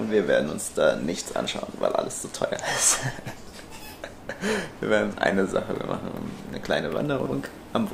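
At 7.2 s, running to 7.32 s, two chunks are out of order: a 60 ms chunk arrives one chunk late and plays after the one meant to follow it. Nothing drops out, unlike a dropout or gap, so the moment sounds briefly jumbled, with three hard joins.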